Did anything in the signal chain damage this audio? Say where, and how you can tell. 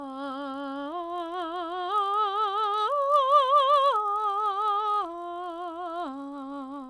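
Yes. The sample-rate conversion stage, here the downsampling from 48 kHz to 24 kHz, restarted its resampler on every block instead of carrying its filter state across block boundaries. Each 20 ms block was converted in isolation, so the filter saw wrong neighbouring samples at every edge and left a small error there. Throughout the music this comes out as a buzz at 50 Hz, the block rate, riding on the signal and vanishing wherever the sound drops out.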